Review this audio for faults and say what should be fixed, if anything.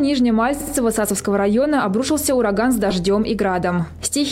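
There are two spots with repeated frames. At 0.60 s a chunk of about 60 ms plays twice more, through 0.74 s, which fits a run of about three compressed frames being resent and adds roughly 140 ms. At 2.91 s a tiny 2.9 ms block repeats three extra times, giving a quick stutter. To prevent it, make the writer or transport deduplicate frames by sequence number.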